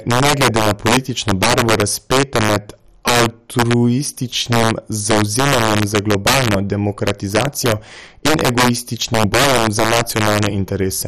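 Speech runs through the whole clip with integer overflow: the signal is driven about 10 dB past full scale, and instead of being limited, the loudest peaks wrap around to the opposite sign. A few percent of samples go over, and each one produces a violent crack on the louder syllables, far harsher than ordinary clipping. On a waveform these peaks jump from the top rail straight to the bottom, leaving sheer vertical spikes across the full range. On a spectrogram they show as thin broadband streaks. Under that damage the audio is dull, with a gurgling, granular texture. Nothing is present above 13.8 kHz, and the upper region flickers as whole sub-bands switch on and off. That behaviour is characteristic of MP2 compression and fits a starved bitrate of around 56 kbps, with too few bits to code every band. Heavy MP2 encoding is the likely cause. A spectrogram would show a hard ceiling at 13.8 kHz and blocky, patchy energy just beneath it.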